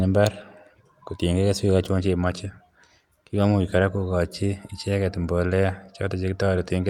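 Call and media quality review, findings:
Listened through the speech recording; nothing stood out.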